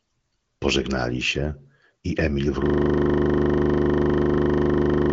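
Speech, carried over an AMR-WB wideband path that leaves nothing above about 7.7 kHz, breaks into a system hang loop at 2.66 s that runs to the end. A frozen driver left the hardware replaying one 40 ms slice of its ring buffer, so the same fragment repeats roughly sixty times as a 25 Hz buzzy stutter. The waveform shows an identical short shape tiled end to end. The spectrogram turns into frozen vertical banding spaced every 40 ms, with no further change in content.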